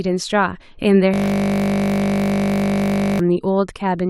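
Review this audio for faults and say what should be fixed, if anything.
From 1.14 to 3.19 s the speech turns into a steady 50 Hz buzz. This is a system hang loop: the driver froze while one 20 ms buffer replayed. A watchdog that mutes or zero-fills the output whenever the audio thread stops refilling its buffer would prevent it.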